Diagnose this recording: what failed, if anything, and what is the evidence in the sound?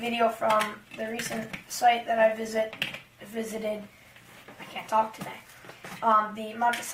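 The adaptive stream started at a low bitrate, a playback-side choice made before the connection was measured. From 0.0 to 4.0 s the treble is thin and codec artefacts are heavier, which fits a low-rate Opus encoding near 24 kbit/s. At 4.0 s the quality jumps cleanly, with no gap.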